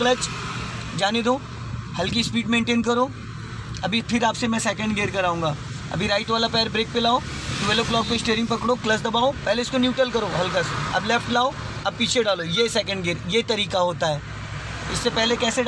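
No technical faults can be heard anywhere in this recording.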